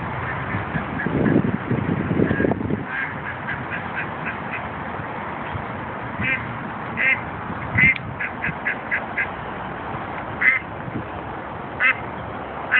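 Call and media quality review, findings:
No audible faults found; no issues to report.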